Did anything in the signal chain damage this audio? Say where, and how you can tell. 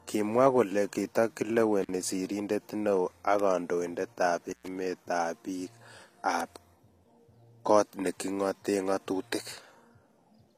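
Yes. Intermittent contact in the analogue wiring breaks the sound twice, at 1.82 to 1.91 s and 4.49 to 4.68 s. A loose plug or cable opens the line for about 43 ms and then 114 ms, so the audio drops out with crackle at each edge.

Bit error spikes from the digital link or storage give sharp ticks at 3.40, 6.41 and 7.69 s. A single flipped bit throws one sample, two samples or three in a row by a power of two. Each event is a broadband click unrelated to the speech.

HE-AAC compression at the codec stage runs throughout: damage is plainly audible and nothing exists above 14.9 kHz, which fits a low bitrate around 24 kbps. The treble is likely rebuilt by spectral band replication, so its harmonics don't line up with those below.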